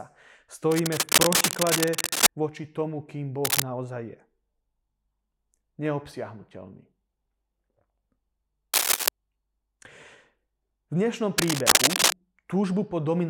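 Four bursts of scratchy, rustling crackle sit on top of this speech clip, a few decibels louder than the talker: from 0.71 to 2.27 s, ending just before "voči tomu kým"; from 3.45 to 3.62 s, right after that phrase; from 8.74 to 9.09 s; and from 11.38 to 12.13 s. This is cable scratch noise, likely from a worn cable or connector being moved, its contact resistance flickering and injecting dense, uneven noise.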